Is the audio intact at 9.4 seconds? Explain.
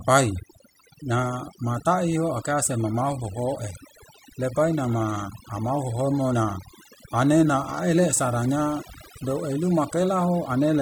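No. At 9.4 seconds the speech is affected by overdone noise removal, which runs through the whole clip. The reduction is set too strong. It pushes individual frequency bands down whenever they sit near its noise estimate. Quiet parts of the voice vanish too. The background drops and breaks up into twinkling specks.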